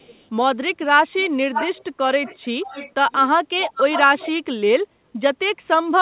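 Speech with an echo leak: a delayed copy of the talker comes back at 0.00–0.26 s (453 ms late, very faint), then 560 ms late at 1.54–1.84, 2.24–2.93, 3.11–3.21, 3.60–4.00 and 4.18–4.29 s, sometimes nearly as loud as the speech. The likely cause is a speakerphone whose echo canceller let its own pickup through.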